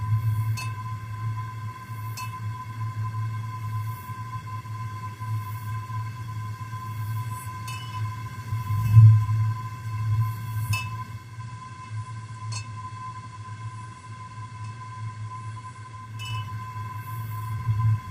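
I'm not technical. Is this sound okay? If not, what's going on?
No. From 11.09 to 16.30 s there is digital radio blending to analogue. The receiver lost its digital signal and faded over about 0.36 s to the FM broadcast, so faint hiss appears and the level drops slightly.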